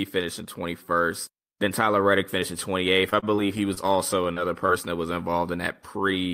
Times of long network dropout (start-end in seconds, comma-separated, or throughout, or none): none